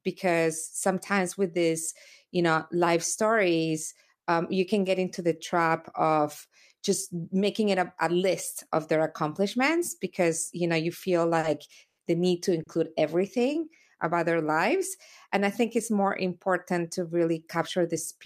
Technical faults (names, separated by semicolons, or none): short stall from a late packet; call audio freeze